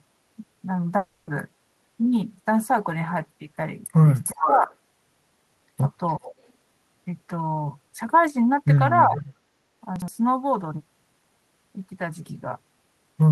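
At 0.97 s the speech breaks off until 1.30 s. In its place is a buzzy continuation of the last sound, fading over about 0.3 s. The gap never falls to true silence. When the speech returns, roughly 300 ms of it is simply gone. This is most likely a long network dropout. Audio stopped arriving, and the receiver filled the gap by extending what it last had. The missing stretch was never played.

From 4.23 to 4.46 s a delayed copy of the speech can be heard. It trails the original by about 0.4 s. It is nearly as loud as the speech itself, so it clearly doubles it. This is likely an echo leak. A loudspeaker's output reached the far microphone. The echo canceller there failed to remove it, and it came back down the line.

Overlapping that, from 4.33 to 4.71 s, the speech dips in pieces by about 10 dB at the deepest. About a fifth of a second is affected in total. This is likely speech suppressed in double talk. 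With the echo and the talker present together, the canceller could not tell them apart. It turned both down.

The echo leak returns from 6.10 to 6.32 s. The delay is again about 0.4 s, at 404 ms. This time the copy is faint, well below the speech.

From 9.07 to 9.22 s the speech again drops by about 10 dB. The dip totals roughly a tenth of a second. This is likely the same double-talk suppression, briefly cutting the talker while the canceller held its level down.

Between 9.96 and 10.08 s the speech sounds jumbled for a moment. This is chunks out of order. One 60 ms chunk arrived a chunk late. It played after the chunk that should have followed it. Nothing is missing, but the swapped order leaves hard edges at each seam.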